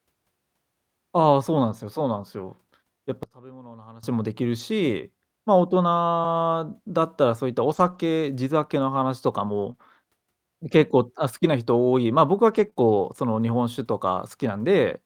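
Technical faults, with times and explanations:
3.23–4.03 s, one channel inverted: For this 0.8 s stretch the speech level falls by about 21 dB and the voice turns faint. The likely cause is one stereo channel with reversed polarity, so when left and right are summed to mono the centred voice, common to both, cancels. Only the small difference between the channels remains, which is why a faint residue is heard instead of the full voice.
4.59–12.78 s, scattered short gaps: Across this span there are about four brief hiccups, spread out rather than clustered, with the longest around 20 ms. Roughly 80 ms of audio went missing in total. The receiver covered each hole by extending the preceding sound, and the concealment and its blending spread over about 260 ms. Because only about 1 percent of the span is patched, the speech stays clear, with short smears or ticks at each repair.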